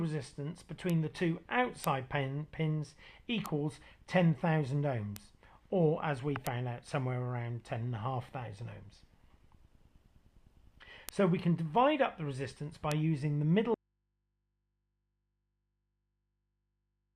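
Right from the start there's a run of bit error spikes, single sharp ticks at 0.90, 1.84, 3.46, 5.16, 6.47, 11.09 and 12.92 s. Each is a flipped bit throwing one sample, three at 12.92, way off and straight back, so you get a broadband click that has nothing to do with the sound.

Then at 13.74 s the audio just drops out to a faint residue and stays gone to the end. All that's left is mains hum, roughly 50 dB under the signal, most likely an open input still live after the source was lost.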